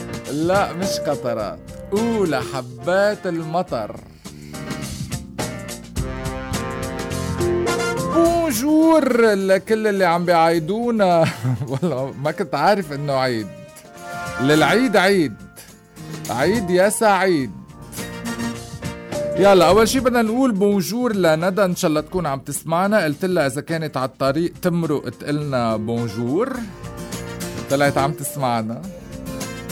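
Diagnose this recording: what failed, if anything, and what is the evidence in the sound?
Nothing in the recording stood out on listening as a sign that any stage had failed.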